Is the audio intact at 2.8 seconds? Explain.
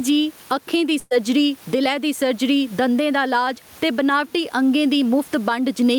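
No, gain pumping runs throughout, likely from excessive gain and a fast limiter: the gain swings about 10 dB, pulling loud and soft parts closer in level so the speech sounds squashed.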